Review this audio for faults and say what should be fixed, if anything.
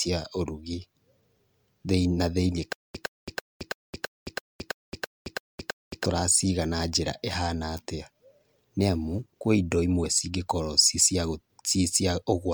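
Generation loss runs through the whole recording: the speech sounds swirly, smeared and hollow, with consonant attacks blurred beyond what a single MP3 pass at 128 kbit/s would leave. The likely cause is repeated decoding and re-encoding, about five passes, each quantising on a shifted frame grid so the damage accumulates. On a spectrogram this shows as flickering holes and mottled, blocky texture across the upper bands, with content running up to about 20.1 kHz. Prevent it by keeping a lossless master and encoding to MP3 only once, at the final step.

From 2.73 s to 6.04 s, just after "na thĩiniĩ", there is a stutter with silent gaps. A 112.81 ms fragment repeats ten times at a steady 330.88 ms period, and each repeat is followed by 218.07 ms of digital silence. The speech that belonged in that span is missing. The likely cause is a player or stream stalling and replaying its last buffered fragment at each retry before running dry. 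The waveform shows identical short bursts separated by flat silent gaps, and the spectrogram shows matching repeated blocks with blank columns between them. Prevent it by giving the stream enough buffering and having the player resume from the correct position rather than replaying stale data.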